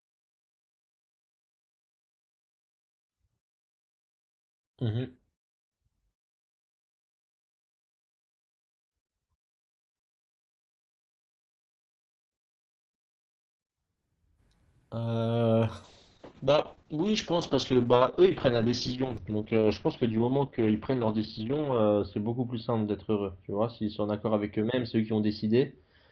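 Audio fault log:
15.84–26.11 s: call bitrate drop. The speech turns coarse and muffled as its top end narrows from 12 kHz to 6 kHz. This fits an encoder cut to about 7 kbps.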